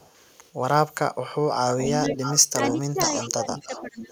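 From 0 to 0.33 s, a loudspeaker echo likely slipped past the far side's echo canceller, causing echo leak: a very faint copy of the speech trailing about 464 ms behind. From 1.7 s to the end the leak is likely back and stronger, a copy roughly 10 dB below the speech, delayed about 596 ms. During that echo, the canceller likely mistook both sides talking at once for echo and turned the talker down, so speech is suppressed in double talk. Between 1.83 and 2.13 s the voice dips by around 10 dB, and from 2.54 s to 4.11 s it drops by around 15 dB for about a second in total.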